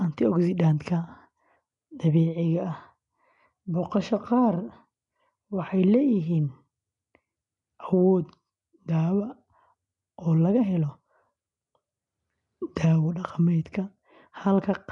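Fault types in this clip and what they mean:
Nellymoser compression: the audio was likely coded with Flash's Nellymoser Asao codec at a rate consistent with 44 kbps, starving weaker bands and padding them with noise. The speech gains a gritty, hissing fringe and a blurred, submerged character, with nothing above 10.6 kHz.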